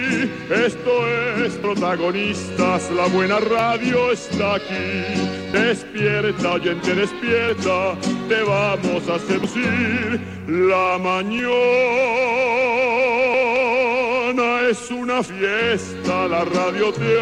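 Audio missing between chunks skips at 1.64, 3.59, 5.54, 7.49, 9.44, 11.39, 13.34 and 15.29 s. Each time about 50 ms drops out and the edges butt together, likely from losses at roughly 2-second chunk handovers.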